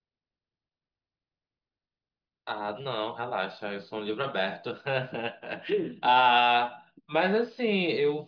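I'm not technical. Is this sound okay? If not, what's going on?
Yes, this speech recording sounds fine from a technical point of view. Nothing in it points to a problem you would need to worry about.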